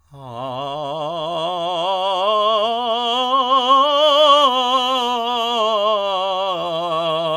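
Nothing technical stands out in this bit of music; it sounds fine the whole way and there's nothing here to flag.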